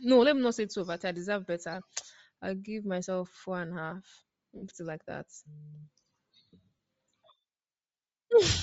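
The speech has a breathy, grainy upper edge throughout. That fits Bluetooth LC3 compression, likely at a low bitrate around 32 kbps with short 7.5 ms frames. From 4.56 to 4.63 s, just before "like that", lost LE Audio frames leave a 60 ms noisy smear. At 6.75 s a second 37.5 ms loss does the same. Each time the decoder repeats the last spectrum with scrambled phase.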